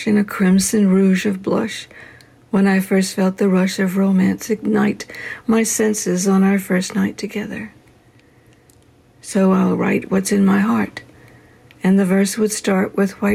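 Gain pumping runs through the whole clip. The level never settles. Each loud sound pushes the overall level down. The swing is a few decibels. Loud and soft passages sit closer together than they should, and the sound feels squashed. The likely cause is input gain set far too high, with a fast limiter or compressor clamping down on every peak.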